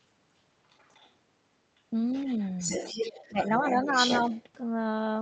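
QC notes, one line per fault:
0.70–1.11 s and 2.13–4.43 s: other side's voice leaking through. A second voice sits under the speech, barely there at first, about 35 dB down, then much stronger at nearly the talker's level. This is likely loudspeaker playback that the echo canceller failed to remove from the microphone.
3.29–3.39 s: speech suppressed in double talk. During the strong leak, the talker's level dips by about 15 dB for roughly a tenth of a second. Both voices overlap here, and the echo canceller likely turned everything down because it could not separate the talker from the echo.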